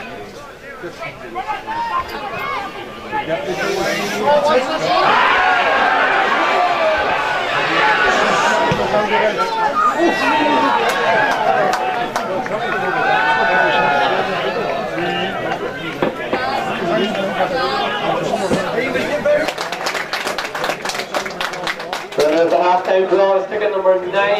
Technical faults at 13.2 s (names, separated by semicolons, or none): none